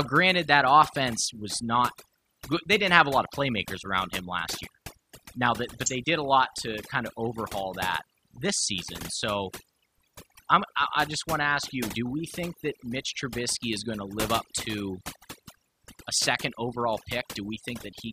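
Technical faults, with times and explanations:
Throughout: overdone noise removal. A noise reducer set far too aggressively clamps individual frequency bands down whenever they sit near its noise estimate, so the background drops and breaks up into twinkling specks, while quiet speech detail is stripped away, unlike plain low-pass dullness.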